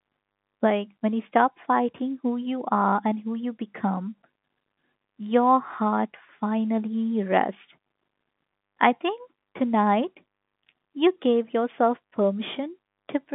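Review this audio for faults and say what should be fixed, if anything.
Nothing to fix: the speech sits in a G.711 mu-law telephone band of roughly 150 Hz to 3.6 kHz with nothing above 3.8 kHz, which is normal for that line.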